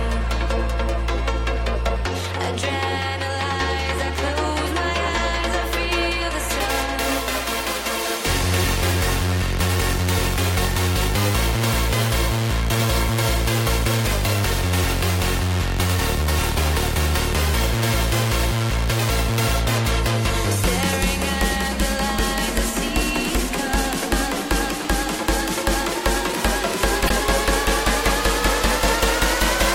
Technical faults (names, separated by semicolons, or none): damaged data in a compressed stream